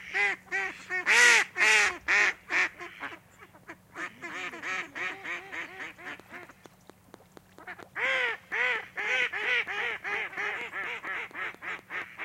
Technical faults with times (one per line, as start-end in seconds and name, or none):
6.20-12.03 train of clicks